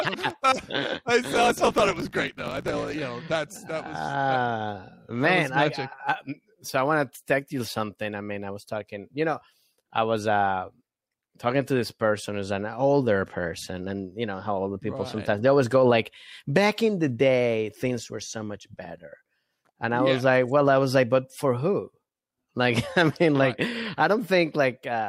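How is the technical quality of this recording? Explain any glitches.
Two glitches stand out, both near the start of the recording.

At 0.30 s there is a bit error spike: a single sharp tick, over within three samples. One flipped bit throws the sample value off by a power of two, and it snaps straight back on the next good sample. Because the jump bears no relation to the underlying sound, the click lands as a broadband transient with no tonal character, brief enough to read as a point event.

From 1.30 s to 2.96 s there is a block size mismatch (truncated). An upstream stage writes longer blocks than the following stage reads, so the tail of every block is discarded. The regular discontinuities at each block boundary produce a buzz at about 54 Hz, which fits 1024-sample blocks being written. With material dropped each cycle, the audio runs about 1.16 times fast while staying at roughly its normal pitch.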